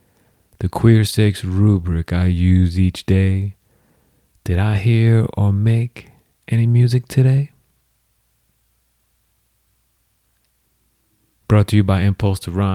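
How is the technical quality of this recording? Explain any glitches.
No technical glitches can be heard anywhere in the recording. The speech runs without any fault that needs explaining.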